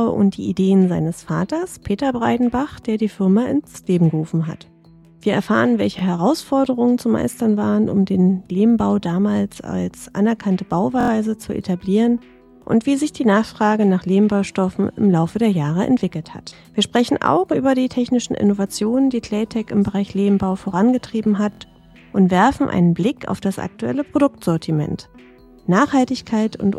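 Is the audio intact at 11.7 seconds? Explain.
Yes, the audio is intact at 11.7 seconds, with no dropout, click, distortion or other fault at that point.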